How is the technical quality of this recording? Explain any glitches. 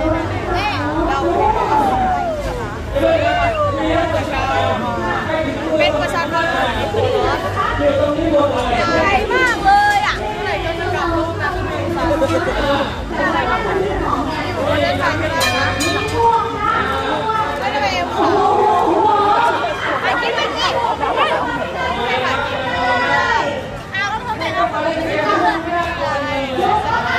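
Nothing stood out as a technical problem on listening to the recording.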